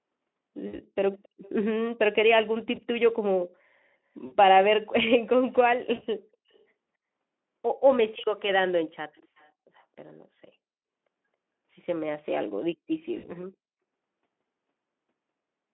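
VoIP packet loss concealed by the speech codec at 0.67, 2.75, 4.25, 5.95, 8.21 and 13.17 s: the decoder extrapolates through gaps of 20 to 60 ms, leaving brief buzzy, fading smears. An echo leak at 1.23–1.5, 6.53–6.59 and 9.15–9.49 s returns a faint copy about 273 ms late, likely from a loudspeaker whose echo canceller missed some pickup.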